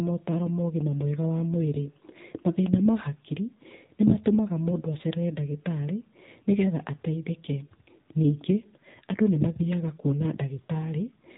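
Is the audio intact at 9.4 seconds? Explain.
No. At 9.4 s the speech sounds thin, buzzy and synthetic, with nothing above 4 kHz, as it does for the whole clip. That is AMR narrowband mobile codec damage: the voice is rebuilt from a vocal-tract model and a few pulses per frame, and the degradation fits a low rate around 7.4 kbps.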